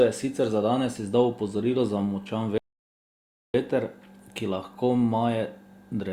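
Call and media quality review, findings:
Rebuffering stall, 2.58 to 3.54 s: speech drops to silence after "izdal opozorilo za močan", resumes cleanly at "veter ki lahko". Player buffer underrun; playback paused until data arrived. No content lost, about 0.96 s added.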